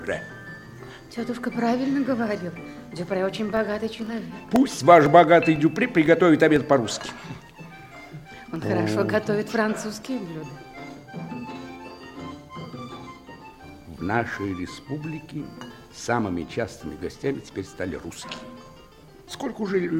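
From 2.57 s to 8.56 s there are periodic USB or driver dropouts. Every 0.5 s, something stalls the audio path. Around two milliseconds of sound is lost each time and replaced by silence. About fifteen evenly spaced ticks result, audible only where sound is present.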